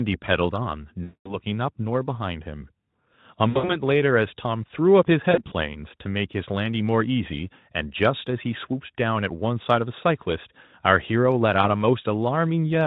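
VoIP packet loss concealed by the speech codec hits at 1.03–1.37 s, 3.50–3.77 s, 5.31–5.53 s and 11.61–11.67 s. The decoder stretches its last pitch into a fading buzz, and the sound stays weak briefly afterwards. That sets it apart from a clean dropout to silence.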